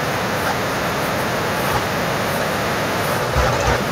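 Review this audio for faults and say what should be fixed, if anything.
No faults; nothing needs fixing.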